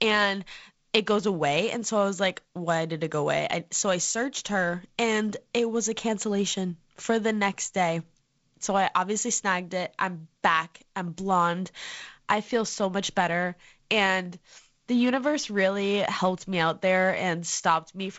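No technical faults occur in this speech, which comes over G.722 wideband telephone coding at 48 kbit/s with content reaching up to 7.7 kHz.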